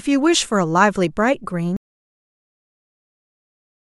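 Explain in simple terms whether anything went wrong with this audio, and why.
Audio dropout to silence, starting at about 1.77 s and lasting to the very end of the clip. Up to that point the speech comes through, then it stops mid-flow and is replaced by total silence, with not even the faint background hiss of the room. That dead quiet shows the recording kept running while receiving nothing. The likely cause is the input being lost, through a disconnected device, a broken link or an accidental mute. Whatever was said afterwards is gone.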